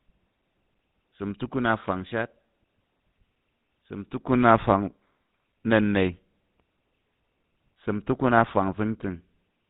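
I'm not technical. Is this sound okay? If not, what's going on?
No. The whole recording has passed through the GSM full-rate codec, the original mobile-phone voice system. It squeezes speech by imitating the shape of the mouth and throat and then feeding that model a simplified series of regular pulses instead of the real voice. It also throws away everything above 4 kHz. The result, from start to finish, is speech that sounds buzzy and gravelly, with a muffled, phone-line dullness, and the damage is plainly audible.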